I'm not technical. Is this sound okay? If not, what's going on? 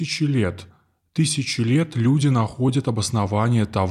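No. From 0.21 to 2.87 s there are about three sharp ticks, roughly one every second and a half. These are word clock ticks: two digital devices keep slightly different time, so a sample is occasionally skipped or repeated.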